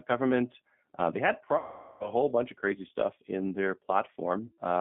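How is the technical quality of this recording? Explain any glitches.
The technical quality is poor: the whole recording passes through a low-bitrate telephone codec, and the line drops out twice.

The G.729 codec, running at 8 kbit/s, rebuilds the speech from a vocal tract filter, a pitch predictor and a few pulses per frame, not from the actual waveform. The line passes only about 150 Hz to 3.6 kHz, so the speech sounds thin and muffled. The coarse pulse coding adds a plainly audible rough, slightly synthetic edge throughout.

VoIP packet loss concealed by the speech codec occurs twice. From 1.58 to 2.11 s, after "they had" and before "whole bunch of crazy", about 420 ms of audio went missing, which points to a run of around fourteen lost packets. The decoder kept extending its last pitch and filter at falling gain, producing a stretched, buzzy tone or coloured noise that fades, and the speech stays weak as it recovers. 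A shorter gap of about 120 ms, at 4.46 to 4.61 s, sounds the same but briefer.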